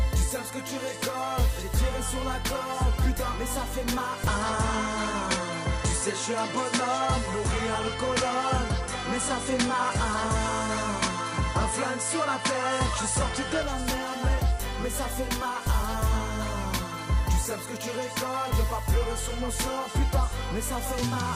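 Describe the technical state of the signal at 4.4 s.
At 4.4 s the signal is inside a span, from 4.27 to 13.63 s, where the input has likely switched to a poorer device. The band stops near 10.9 kHz, so the sound dulls, with no gap at the switch and no clear level change. A spectrogram shows the top edge dropping abruptly, plus a faint new noise floor well below the signal.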